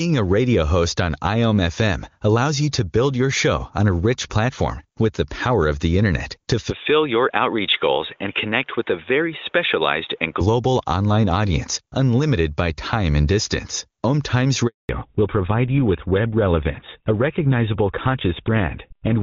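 Input switched to a poorer device, from 6.71 to 10.41 s: right after "of the internet to", the sound abruptly turns dull and boxy with nothing above 3.8 kHz, likely because recording moved to a narrower-band microphone or a headset's call profile. There is no silence at the switch, the level stays about the same, and a faint new background noise sits roughly 40 dB below the speech. Full bandwidth returns at 10.41 s, just before "online audience unlimited by".

Handover gap, from 14.67 to 14.89 s: the call was passed between networks and no speech frames arrived during the transfer, so the speech fades within a few tens of milliseconds and stays silent for 220 ms. Whatever was said in that span is lost.

Fallback to narrowband, from 14.89 s to the end: after the gap, the clear HD Voice sound, which fits AMR-WB at its highest rate, gives way to a duller, rougher tone with nothing above 4 kHz. 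This points to GSM full rate at 13 kbit/s taking over from the wideband codec.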